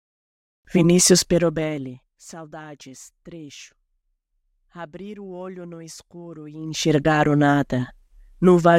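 From 1.17 to 2.23 s there's zipper noise: the speech level comes down by around 20 dB, but in discrete jumps about a hundred times a second instead of a smooth ramp, so each jump leaves a tiny click and you hear a fine buzzy ticking riding on the speech. It happens again from 6.57 to 6.92 s, right after "olho no escuro e", this time coming up around 20 dB in steps of about 1 dB.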